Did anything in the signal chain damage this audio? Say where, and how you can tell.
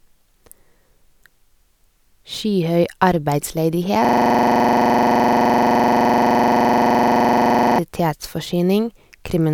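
Yes: the computer or driver froze in a system hang loop from 4.05 to 7.79 s, repeating one 43 ms slice (fitting a 2048-sample buffer) as a 23.4 Hz buzzy stutter.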